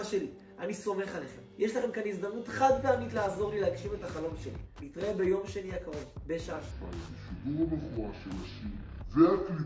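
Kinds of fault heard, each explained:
Wrong sample rate: From 6.71 s the audio plays at two-thirds speed, about 7 semitones lower. This fits 24 kHz material played back at 16 kHz.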